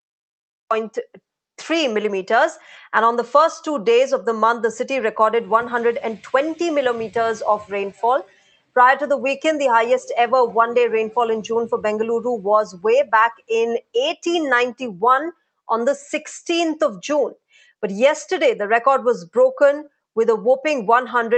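A cut-off start opens the clip: there is digital silence until 0.71 s, and then the audio begins abruptly in the middle of a sound, with no natural attack or fade-in, because capture started after the sound was already under way. A sound cut by the noise suppressor appears at 8.24–8.76 s and again at 13.34–13.5 s, where the suppressor mistook the sound for noise and pulled it down by about 21 dB, so the level sinks across roughly half a second and then a brief moment. The audio reached us through a WebRTC call path using Opus, whose band limit leaves nothing above about 8 kHz.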